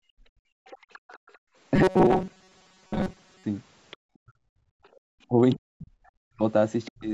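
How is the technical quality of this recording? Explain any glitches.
The recording has real problems, almost all from the call's echo handling, plus one stretch of robotic playback.

From 0.00 to 1.56 s, and again from 4.61 to 4.99 s, the background is gated by the echo canceller. While the far end was playing, it clamped the mic hard, about 33 dB and then about 40 dB down, so the room tone dips out for roughly a second in total, then about 0.3 s.

The other side's voice is leaking through at 0.66 to 1.38 s, then briefly at 3.91 to 3.97, 5.50 to 5.55 and 6.85 to 6.89 s. These are faint scraps, roughly 30 dB and then 25 dB under the talker, most likely residual loudspeaker echo the canceller didn't fully remove.

Between 1.76 and 3.44 s the sound goes rigid and metallic, with a fixed buzz at 188 Hz. That is robotic sound from repeated short buffers: roughly 70% of that stretch is a repeated chunk of about 5.3 ms, and the repetition rate sets the pitch. 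Late-arriving audio is the likely trigger.

Speech is suppressed in double talk at 4.24 to 4.33 s and again from 5.27 s to the end. The talker's level drops by around 40 dB in pieces, about 0.1 s and then roughly 0.7 s in total, likely because the canceller couldn't separate the talker from the overlapping far-end voice. The lowest bass is filtered out, which is normal for the call's microphone processing.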